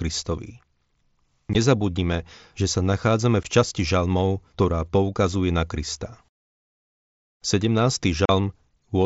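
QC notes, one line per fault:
1.53 s, 3.43 s and 8.25 to 8.29 s, unconcealed Bluetooth headset packet loss: voice packets between headset and phone went missing on the wideband mSBC link, and nothing masked the gaps, so silence or an idle pattern took their place. The first two holes last 15 ms each, the second falling between "že sa nachádzame" and "časti žalmov ktorá poukazuje". The last runs 37.5 ms. Their abrupt edges cut the speech off and back on, leaving brief chopped dropouts.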